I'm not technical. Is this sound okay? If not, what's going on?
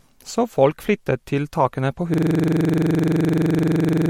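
No. At 2.14 s, after "flyttet til takene på", the computer froze in a system hang loop. One 43 ms snippet repeats 46 times until the end.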